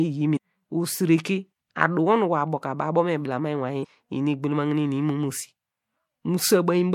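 At 0.33 to 0.37 s and again at 3.80 to 3.85 s there's damaged data in the compressed stream. Corrupted bytes throw the decoder off its frames, so each spot becomes a short, roughly 40 ms glitch before it picks up clean frames again.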